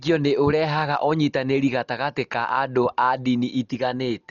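Throughout the speech the sound is dull and heavily damaged, with nothing above 7 kHz and a rough, fluttering noise clinging to tonal parts. This is likely Dolby Digital compression at a very low bitrate, around 40 kbps, where starved frequency lines get filled with noise.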